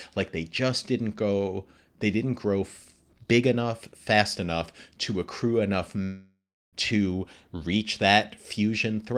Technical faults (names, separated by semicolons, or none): long network dropout